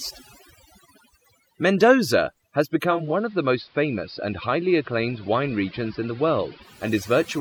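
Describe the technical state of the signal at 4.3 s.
At 4.3 s the receiver is on the analogue AM broadcast. It lost the digital stream and blended across to AM over about 344 ms, staying there from 2.82 s to 6.95 s. The sound drops about 2 dB in level, and carries a faint hiss well below the speech.

Overdone noise removal runs under this whole span. It pulls individual frequency bands down whenever they sit close to its noise estimate, taking quieter parts of the speech with them. The result is near-silent gaps with twinkling specks.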